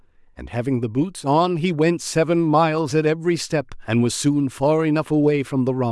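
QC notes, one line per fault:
No faults found.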